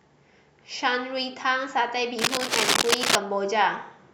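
From 2.19 to 3.16 s, cable scratch noise, likely a worn connector shifting, rasps over the speech, louder than it, showing as dense, ragged broadband smears.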